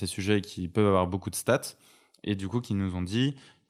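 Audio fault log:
No faults detected in the speech; nothing to log.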